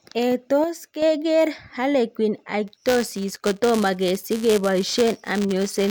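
From 0.64 s to 1.02 s the speech level falls abruptly by about 6 dB and then returns just as suddenly. The sound is otherwise unchanged. The cause is likely one channel dropping out: with one side of the stereo pair missing, the mono sum keeps only half of what both channels carried, which accounts for the 6 dB step. Anything unique to the lost side vanishes for that stretch.

Buffer tearing begins at 2.67 s and continues to the end of the clip. A robotic buzz rides on the speech at about 188 Hz, which fits a 256-sample buffer. The writing program and the reading hardware have drifted so that they cross within every period. A small slice of each buffer, on the order of a percent or two, holds audio from roughly 10 ms earlier, with hard joins on both sides. The buzz is present only while there is signal.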